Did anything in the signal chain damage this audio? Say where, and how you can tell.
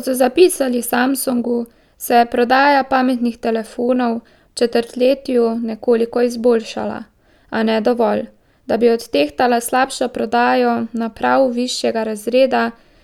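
No, nothing along the chain has audibly damaged this speech recording, and the signal holds steady and continuous with no stage leaving a mark on it.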